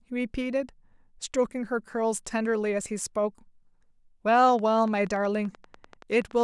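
A train of clicks runs from 4.39 s to 6.42 s in this speech recording, a regular ticking at about 10.4 clicks per second, some twenty in all. Each pulse has much the same shape and reaches roughly the level of the speech itself, and the ticks carry on through any gaps. The steady spacing points to a repeating disturbance, likely electrical interference from nearby equipment or a faulty connection or power supply.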